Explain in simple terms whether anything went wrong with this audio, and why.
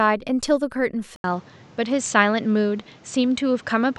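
Input switched to a poorer device at 1.16 s: after an 80 ms gap, the speech sounds duller, with nothing above 8.2 kHz, likely from another microphone.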